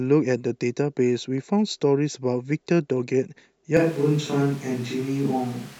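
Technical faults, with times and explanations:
3.77 s to end, switch to a distant microphone: the sound turns abruptly hollow and roomy at similar level, likely from a farther mic. The spectrogram shows thinner lows, smeared tails and room noise about 25 dB down.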